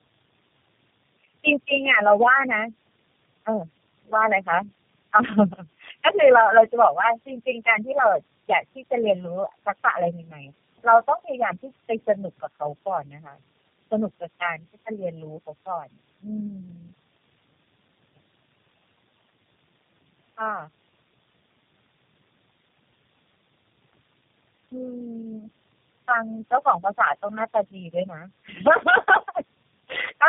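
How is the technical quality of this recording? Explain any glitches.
Technical quality is poor, with two faults running through the whole recording.

Channel delay (comb filtering) is present from start to finish. One channel trails the other by roughly a millisecond and a half, and the mono sum cancels shared content at evenly spaced frequencies, starting near 300 Hz. The speech sounds hollow and phasey, with fixed spectral notches.

Tandem speech coding also affects the entire clip. The speech appears to have passed through about four low-rate coders in sequence, consistent with G.729A and AMR-NB links, each re-encoding the previous stage's degraded output. The result is rough, muffled and warbly, with nothing above 3.3 kHz.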